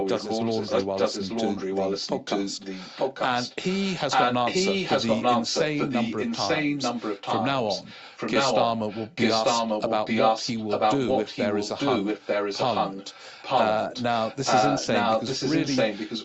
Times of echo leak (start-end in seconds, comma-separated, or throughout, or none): 0.00-16.25